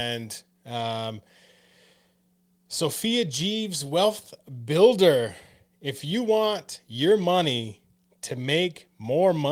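No technical fault can be heard at any point in the recording; the signal stays steady and intact throughout.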